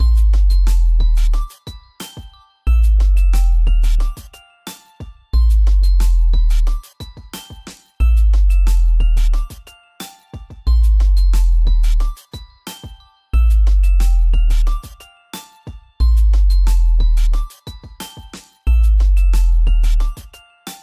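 Nothing goes wrong anywhere in this one, so there's no fault to walk through.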